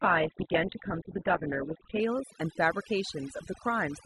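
From the start to 2.0 s, the speech is dull. Nothing above 4 kHz comes through, and the codec smearing is stronger. This is an adaptive stream starting at a low bitrate. The sound points to a very low Opus rate, around 8 kbit/s.

At 2.0 s the quality jumps up with no gap. The treble returns and the smearing clears. That fits a switch to a much richer version, around 64 kbit/s, once the player had measured the connection.

Through the whole clip there is overdone noise removal. The background drops and breaks up into twinkling specks. The reduction cut bands close to its noise estimate, and quiet parts of the speech were lost with them.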